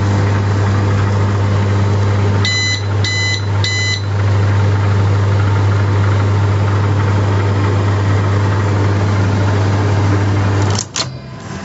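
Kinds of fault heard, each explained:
Gain pumping: The background level swells in the gaps and ducks by around 10 dB under each loud sound, squashing loud and soft parts together, likely from input gain set far too high with a fast limiter pulling it back. Unlike a steady level drop, the background rises again once each loud sound passes.
Chunks out of order: From 1.1 to 1.4 s and again from 8.0 to 8.3 s, a 100 ms piece of audio plays two pieces late, after material that should follow it, giving a jumbled moment with hard joins. Nothing is missing, which sets it apart from dropouts, where the audio is lost.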